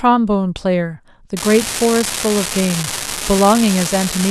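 From 1.37 s onward, an unreliable data bit flips randomly, adding identical spikes of about -7 dBFS: a steady crackle that continues through pauses.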